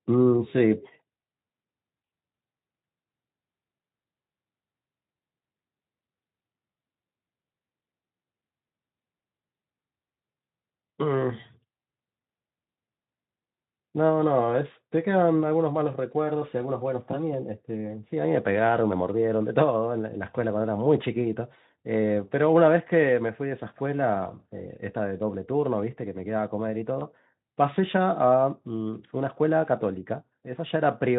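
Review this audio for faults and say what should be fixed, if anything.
Two brief dropouts occur in this speech, at 17.11 to 17.17 s and at 26.99 to 27.05 s. Both are VoIP packet loss concealed by the speech codec. Each gap fits a single lost 20 ms frame. The decoder fills it by extending its last pitch and filter with falling gain, so the sound smears into a short, fading buzzy tone or coloured noise. Because each frame builds on the previous one, the damage lasts about 60 ms, longer than the missing audio. The Speex coding itself adds little or no audible damage. To prevent this, reduce packet loss on the network path and use a larger jitter buffer or forward error correction.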